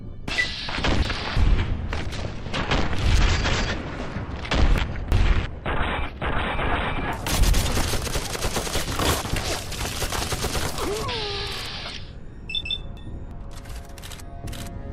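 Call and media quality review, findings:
Chunks out of order at 0.68–1.37 s, 4.78–5.46 s, 8.88–9.56 s and 12.63–13.31 s. Jumbled moment in each span: a chunk of about 341 ms plays one chunk late, after its successor, giving three hard joins per event. Nothing is missing, only misordered. Probable component is the transport or write queue, with a chunk arriving or being written late and played back in arrival order. The fixed 341 ms unit points to block-level reordering.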